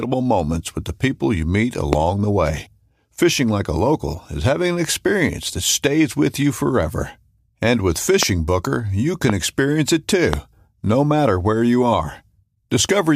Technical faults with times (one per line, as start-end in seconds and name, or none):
1.93-1.95 loud pop
8.23-8.25 loud pop
9.30-9.32 loud pop
10.33-10.35 loud pop